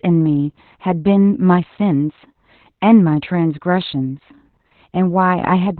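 Opus voice compression runs throughout the speech. Nothing survives above about 4.4 kHz, a narrowband limit, and the heavy, coarse coding of the SILK layer leaves the speech muffled, hoarse and slightly robotic, which points to a bitrate near 8 kbps.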